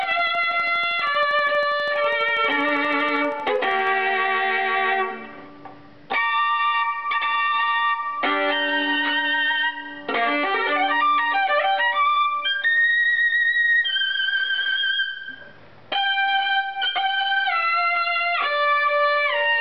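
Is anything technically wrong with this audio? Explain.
Yes. From 0.03 to 3.88 s, likely interference or a faulty connection injects a train of clicks, about 50 regular pulses at 12.5 per second, ticking roughly as loud as the sound itself.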